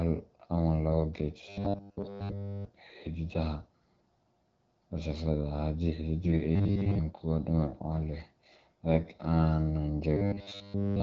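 From 1.49 to 2.65 s, the speech turns into a rigid metallic buzz at 100 Hz. This is robotic sound from repeated short buffers. Nearly all of the audio there is a 10 ms chunk repeating in place of new sound, likely because data arrived too late.

From 6.24 to 6.42 s and again from 8.92 to 9.08 s, the speech goes hoarse and gargly. These are AMR bit errors. A few percent of the less protected bits in the wideband stream were flipped, which fits about eight corrupted 20 ms frames each time.

From 10.17 to 11.02 s, the same 100 Hz robotic buzz returns and lasts to the end of the clip.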